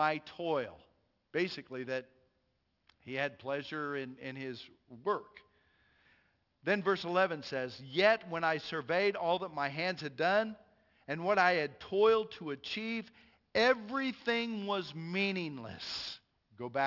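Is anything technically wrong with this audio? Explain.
Yes, there's aliasing through the whole clip. It sounds like the speech was downsampled, which fits a drop from 44.1 kHz to 12 kHz, without an anti-alias filter. Content above 6 kHz folds back down as wrong pitches, leaving gritty, metallic sibilants roughly 20 dB below the speech.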